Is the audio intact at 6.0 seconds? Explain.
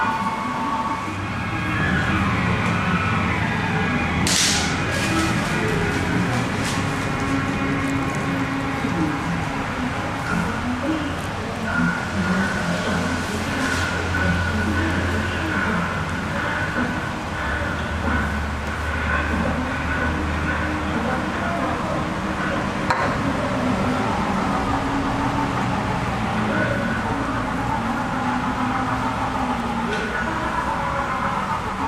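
Yes, the audio is intact at 6.0 seconds, with no fault at that moment.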